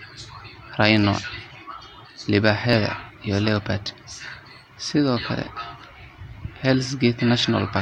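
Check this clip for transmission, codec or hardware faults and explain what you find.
One fault is present: clock drift buffer slips. From 0.77 to 6.64 s, about four clicks recur every 1.96 s, likely mismatched device clocks forcing small sample-block drops or repeats. Their steady spacing sets them apart from random packet-loss glitches.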